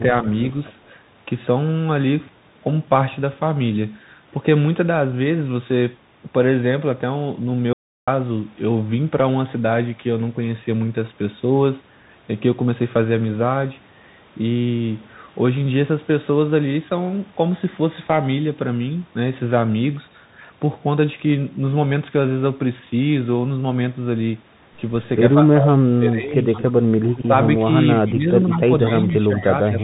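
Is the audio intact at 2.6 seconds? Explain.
No, the Bluetooth CVSD headset codec runs through the whole clip: its one-bit adaptive-step coding cuts everything above 3.8 kHz, leaving scratchy s sounds and grainy hiss.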